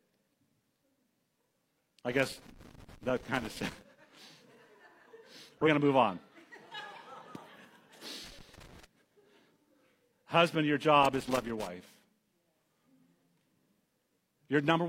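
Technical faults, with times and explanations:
2.12–3.82 s, 8.24–8.85 s and 11.03–11.67 s: loose connector crackle. Each stretch is an irregular scratchy burst laid over the speech. It comes from a worn or dirty contact in the signal path that keeps making and breaking as it shifts. Each break chops the waveform, and any DC standing on the line turns the jumps into small pops. The first burst runs well over a second, and the later two are shorter.
5.58–5.68 s, 7.20–7.26 s and 11.24–11.30 s: compressed frames skipped. At each point the speech lurches forward, losing roughly 100 ms, 50 ms and 100 ms of sound respectively. Whole encoded frames were never played because they were missing or rejected as damaged, so playback resumes a few frames later. The third skip falls inside the third crackle burst.
14.58 s: corrupt frame decoded. A brief glitch appears near the end, peaking around -30 dBFS. 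Flipped bits in roughly two compressed frames were decoded as if valid. Misread gains and codes placed energy at the wrong frequencies for about the length of those frames.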